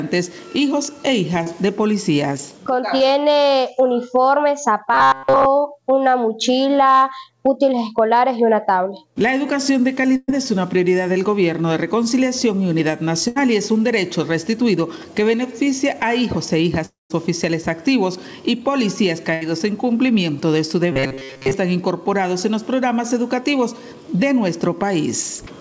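At 1.44 and 2.98 s there's short concealed packet loss: about 20 ms of audio went missing each time, and the decoder papered over it by extending the previous sound, so you get a tiny smear or wobble.

From 4.94 to 5.47 s the sound goes robotic, with a rigid metallic buzz at 134 Hz through most of that stretch. That's likely robotic sound from repeated short buffers: a roughly 7.5 ms chunk looping while fresh audio is skipped.

At 10.16–10.30 s there's a burst of packet loss. About 120 ms is gone, filled by a held, fading continuation with a brief dip to silence, and then the sound picks up further along. Another burst follows at 13.28–13.38 s, with about 80 ms lost and bridged the same way.

From 16.86 to 17.12 s is what's likely a long network dropout. About 240 ms never arrives, the filler fades out, and roughly 150 ms of silence sits there before the audio resumes later in the stream.

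A third burst of packet loss at 19.34–19.43 s swallows about 80 ms.

Finally, from 20.92 to 21.54 s the same 134 Hz robotic buzz returns, likely from the same repeated-buffer looping.

All of this sits on top of a G.722 call path, which doesn't carry anything above 8 kHz.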